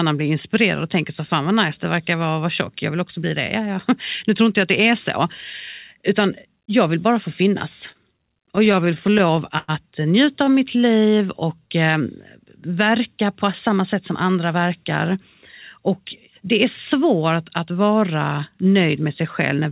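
Right after "vill bara få finnas", from 7.92 to 9.70 s, there's repeated stalls (stutter): the jitter buffer kept running dry, 14 times, and the receiver stretched the last sound to fill about 254 ms, the longest gap 103 ms. Nothing's lost, but it drags and stutters.

Then 10.45 to 11.68 s is a jitter buffer slow-down: repeated pitch periods add 132 ms, so the speech runs at 90% speed with the pitch unchanged and sounds drawn out.

Jitter buffer speed-up follows twice, at 108% speed. From 13.69 to 15.19 s, just after "verka på", roughly 150 ms is trimmed. From 15.80 to 16.29 s, just before "det är svårt att", roughly 50 ms goes. Pitch holds, but it sounds hurried.

Throughout, the band stops at 4 kHz, which fits a 64 kbps G.711 mu-law call path.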